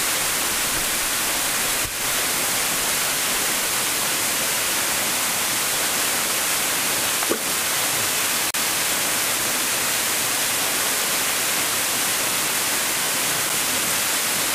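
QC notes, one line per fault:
8.51–8.54 s and 13.49 s, CD skip: a tick and a short mute, around 40 ms at the first point and only a few milliseconds at the second, after which the sound carries on from another place. The laser has jumped to a different turn of the disc's spiral, so playback resumes from a different point.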